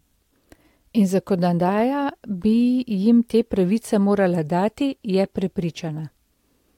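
Nothing goes wrong anywhere in this bit of speech, so there's no technical fault to point to at any moment.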